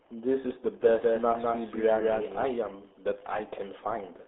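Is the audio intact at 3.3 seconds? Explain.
No, at 3.3 seconds the speech is degraded, as it is throughout, by the RealAudio 14.4 codec. Heavy coding damage leaves a muffled, gargly sound, consistent with an 8 kbit/s dial-up coder, and nothing passes above 3.8 kHz. Unlike simple telephone band-limiting, the gargle is a coding artefact.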